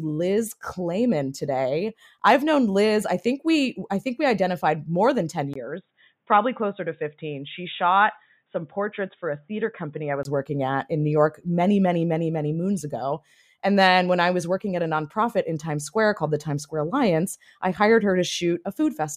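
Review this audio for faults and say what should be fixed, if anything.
At 1.36 s, right after "liz clayman" and before "today i've known liz", there's a tiny click. That's a repeated buffer: a block of about 1.45 ms, which fits a 64-sample buffer, got played one extra time because fresh audio arrived late. Giving the audio thread a slightly larger buffer or higher priority would stop those underruns.

From 5.54 s to 10.25 s the sound goes dull and boxy, with nothing above 3.8 kHz, a 20 ms gap at the switch, a level drop of a few dB and a new, faint noise floor. It clears up just before "working at in". That's most likely the input switched to a poorer device mid-recording. Locking the input device in the recording settings would keep it from switching over.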